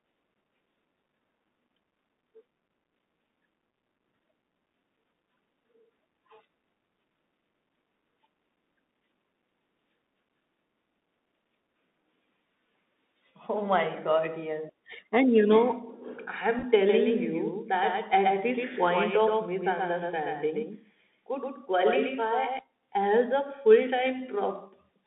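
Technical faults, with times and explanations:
Throughout, Bluetooth CVSD headset codec: the sound is thin and boxed in, with nothing above about 3.7 kHz and little below 200 Hz. A grainy hiss sits under it, and s sounds come out scratchy. CVSD encodes each sample at 64 kHz as a single up-or-down bit with an adapting step size. Fast, loud high-frequency movement outruns that step and distorts, and the constant stepping leaves the granular noise floor.
16.59 to 16.64 s, Bluetooth headset packet repeated: a brief rough, buzzy flutter lasting about 50 ms. About 30 ms of audio went missing, scattered across roughly 45 ms, which fits eight lost voice packets. Each longest gap lasted only a few milliseconds. For each lost packet, the chip decoded the previous packet's bits again. Repeats every 3.75 ms briefly form a buzz near 267 Hz before good packets resume.
16.89 to 22.59 s, doubled audio track: the sound gains a distinct, clean echo. 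A second full-band copy trails around 150 ms behind at about 5 dB below the original, with no reverberant tail or room colouring. The copy appears abruptly and drops out just as suddenly. This is likely the same signal mixed in twice, either through a second, slower capture path or through an edit holding two offset copies.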